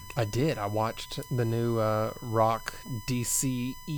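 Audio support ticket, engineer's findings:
USB whine, whole clip. Steady fixed-pitch tone at 1 kHz, strongest there, sitting roughly 20 dB below the speech. Cause: USB 1 ms frame current draw coupling into the audio through shared power or ground. Check grounding and the USB supply path.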